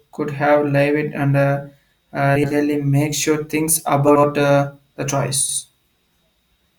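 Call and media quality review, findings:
Frames out of order at 2.35–2.54 s (just before "make sure things"), 4.07–4.25 s (between "make sure things" and "uh the") and 5.41–5.59 s (after "uh the"). Garbled flutter. Adjacent 80 ms blocks are decoded swapped, which fits four-frame groups resequenced in the jitter buffer. No time is lost.

Dropped buffer (overrun) at 4.93 s. A small forward skip of a few milliseconds. The likely cause is the capture side not reading the buffer in time, so the hardware overwrote it and the two sides were joined directly.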